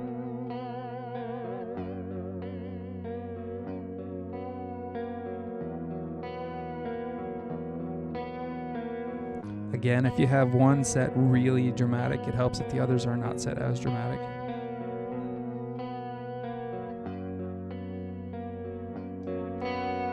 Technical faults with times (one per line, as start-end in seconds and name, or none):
none